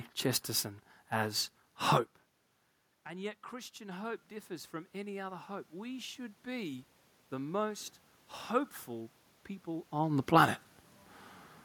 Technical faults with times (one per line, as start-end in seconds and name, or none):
3.04-7.94 automatic gain rising